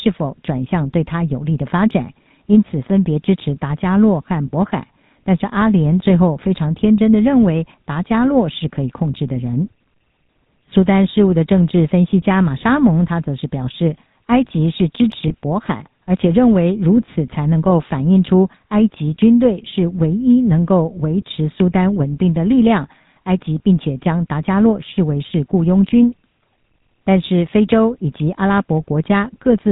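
Speech here has run through the GSM full-rate codec the whole way. Nothing survives above 4 kHz, and the pulse-driven vocal-tract model gives everything that plainly buzzy, gravelly edge, which fits a 13 kbps full-rate stream. Then there are lost GSM frames at 15.28 to 15.32 s and 17.06 to 17.09 s, each a single 20 ms dropout. The decoder just repeats the last good frame, so you get a brief rough, metallic ring in place of the missing bit.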